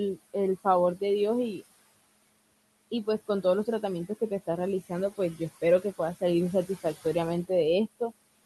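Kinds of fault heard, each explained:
Noise suppressor artifacts: per-band, frame-by-frame cuts of about 20 dB lower the room noise between phrases, while it rises under speech, not a gate.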